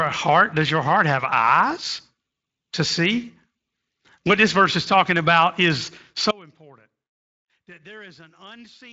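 Right after "is talking about is", at 6.31 s, the speech cuts out abruptly and doesn't come back before the clip ends. That's an audio dropout to a faint residue. The gap isn't dead silent: a faint trace sits about 30 dB below the speech, so the path after the break stayed live. The cause is likely the wanted signal getting lost upstream. It's a hard cut, not a pause or fade. Throughout, the light Speex coding leaves nothing above 7.7 kHz.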